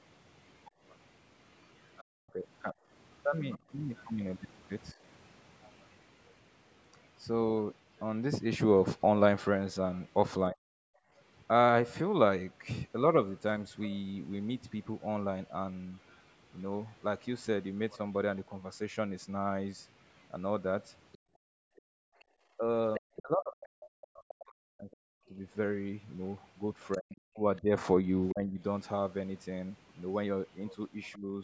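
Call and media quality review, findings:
Other side's voice leaking through, 0.48–31.18 s. Faint second voice under the talker, around 25 dB down. Likely the echo canceller failing to remove loudspeaker playback from the microphone.

Speech suppressed in double talk, 2.24–4.97 s, 10.51–10.64 s, 22.57–31.31 s. Talker dips by up to roughly 40 dB, about 3 s in total in the last span. Likely the echo canceller ducking both voices during overlap.

Background gated by the echo canceller at 2.74–2.88 s (about 16 dB), 10.92–11.11 s (about 17 dB) and 21.18–22.29 s (about 35 dB, around 1 s). Room sound drops out during loudspeaker playback, then returns. Band limit at 8 kHz is from call microphone processing, not a fault.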